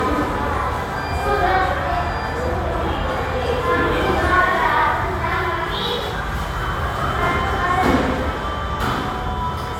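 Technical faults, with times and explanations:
throughout: generation loss. The audio has a swirly, hollow smear and blunted attacks, likely from about three passes through an AAC-LC codec near 96 kbit/s, each requantising on a shifted frame grid. A spectrogram shows nothing above 17 kHz, patchy holes and blurred transient edges.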